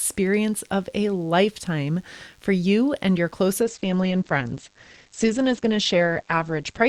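From the first moment to the last, a thin, steady buzz sits under the speech, about 40 dB below it. This is DECT cordless phone buzz. A nearby handset or base transmits a short radio burst every 10 ms, and the audio circuitry rectifies it into a 100 Hz tone rich in harmonics. Its pitch and edgy, rasping texture set it apart from mains hum, which sits at 50 or 60 Hz and sounds rounder and smoother.

At 3.61 s the speech quality drops abruptly and stays degraded to the end. Everything above 8.5 kHz is gone, so sibilants turn dull, and codec artefacts grow stronger. This is an adaptive stream at a lower bitrate. The player switched to a leaner encoding because the connection slowed, which points to a step down from roughly 64 to 16 kbit/s Opus. There is no gap, stutter or repeated fragment at the changeover, which distinguishes it from packet loss or a buffer dropout. Only the fidelity changes, in a clean step.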